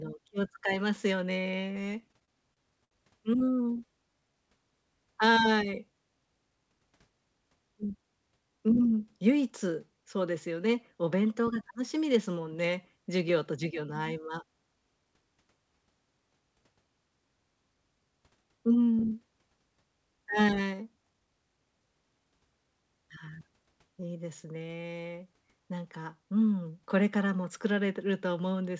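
Speech that drags and stutters from 2.00 to 2.93 s and again from 3.39 to 3.80 s are repeated stalls (stutter): packets arrived late, so the jitter buffer kept running dry and the receiver stretched the last sound over gaps of up to 65 ms. From 3.86 to 4.47 s the talking runs at 90% speed with unchanged pitch, a jitter buffer slow-down that added 71 ms by repeating pitch periods to rebuild its reserve. At 14.15 to 14.54 s it hurries to 111% speed, a jitter buffer speed-up where roughly 50 ms was trimmed to cut excess delay. The call path is audible as nothing above 8 kHz, which points to a wideband codec such as G.722.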